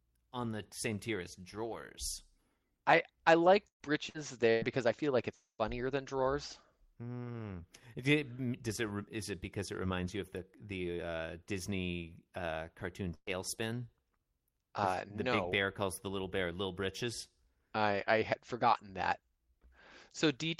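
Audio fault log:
3.67–3.82 s, 4.09–4.17 s, 4.50–4.65 s: burst of packet loss. After "I I", the last sound is extended and faded. About 120, 60 and 120 ms of audio are skipped.
5.34–5.61 s: long network dropout. The sound is stretched into a fading buzz or hiss, then goes silent before "than drawers". About 240 ms is missing, likely from a network stall.
13.14–13.30 s: burst of packet loss. After "uh cartoon", the concealment holds and fades the last sound, ending in a brief silence. About 120 ms is missing.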